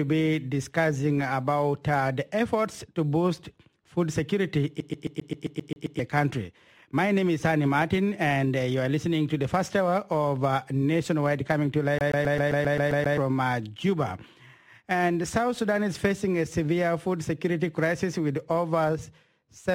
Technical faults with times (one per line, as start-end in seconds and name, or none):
4.80-5.99 CD stuck on one turn
11.98-13.18 CD stuck on one turn